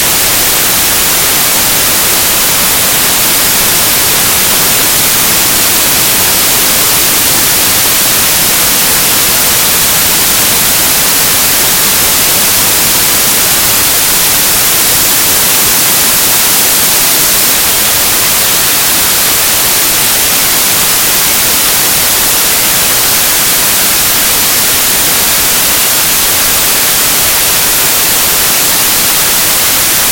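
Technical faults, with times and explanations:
Throughout, samples built from the wrong bytes: the reader is pairing each sample's bytes wrongly, so the jittery low-order bits end up driving the big part of every value. What you hear is loud, harsh broadband noise across the whole clip.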